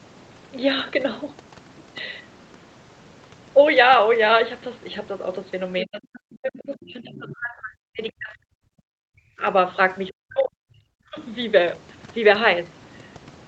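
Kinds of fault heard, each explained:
Speech suppressed in double talk: With both ends talking at once, the echo canceller likely could not separate the near talker from loudspeaker echo and turned both down, so the speech sinks by up to about 40 dB from 5.82 to 9.43 s and again from 10.22 to 11.19 s.
Other side's voice leaking through: The echo canceller likely left part of the loudspeaker signal in the microphone feed, so a brief scrap of a second voice, about 20 dB below the speech, slips through between 7.15 and 7.36 s.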